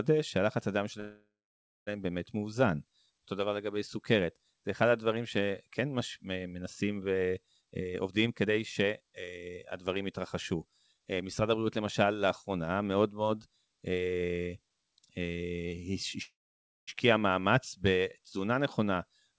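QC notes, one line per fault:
1.00–1.89 s and 16.23–16.89 s, call audio freeze: the sound stalls, the last bit is stretched into a fading buzz, then about 0.59 s and 0.55 s of silence. It likely comes from packets arriving late and the jitter buffer running empty. The spectrogram shows a smeared band decaying into a blank gap. Nothing is lost, so everything after comes later, by about 0.87 s and 0.65 s.
7.60–11.58 s, jitter buffer speed-up: the speech runs about 21% fast at unchanged pitch and sounds hurried. Short pitch-period chunks are cut out repeatedly, about a second in total, to drain a backlog of buffered audio. The waveform shows compressed syllables, while the spectrogram's harmonic spacing stays the same.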